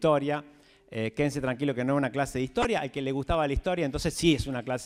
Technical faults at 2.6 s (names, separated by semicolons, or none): DAB burbling